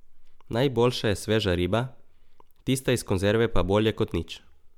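Nothing in the recording stands out as a technical fault; it just runs along as it should.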